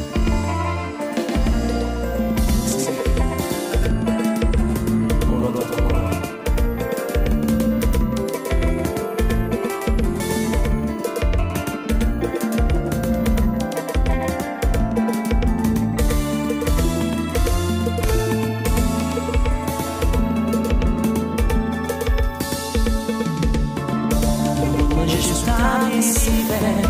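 From start to finish, a doubled audio track runs under the sound: a second, full-band copy at roughly the same level trails by about a tenth of a second, likely from a slower second capture path. Unlike an echo or reverb, it never decays or takes on room colour.

At 10.2 s and again at 18.04 s, a dropped buffer (overrun) produces an abrupt jump forward. The hardware likely overwrote samples before the program collected them. About 20 ms goes missing at the first point and a larger piece, around 70 ms, at the second. No silence fills either gap, which separates this from a dropout.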